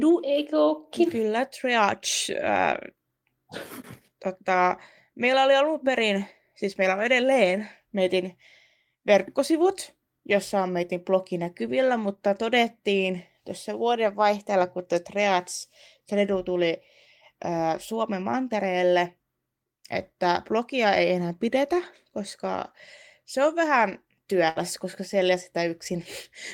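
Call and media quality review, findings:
Burst of packet loss at 24.49 to 24.58 s, after "koska se on vähän". Concealment sustains last sound, fading, about 60 ms. Playback resumes late, about 60 ms of speech skipped. Jitter buffer/network path. Consecutive packets lost or late.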